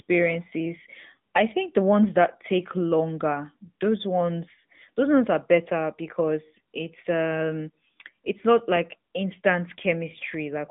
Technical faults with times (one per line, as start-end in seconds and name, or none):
0.00-10.70 AMR narrowband mobile codec